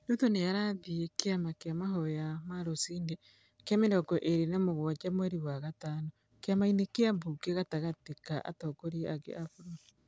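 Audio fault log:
No faults detected in the speech; nothing to log.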